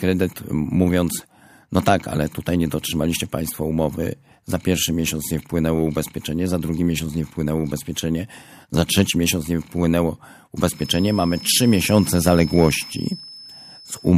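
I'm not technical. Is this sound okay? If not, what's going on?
No. From about 10.70 s to the end, a feedback whistle, likely from the loudspeaker leaking into the microphone, adds a thin, steady high-pitched tone, quietly wavering beneath the speech.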